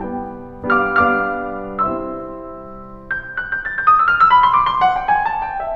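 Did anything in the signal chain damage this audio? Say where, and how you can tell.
No, nothing in this music stood out on listening as damage from any stage of the signal chain.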